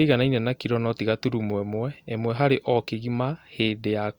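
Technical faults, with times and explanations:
No technical faults can be heard in the speech. There is nothing here that needs a time or an explanation.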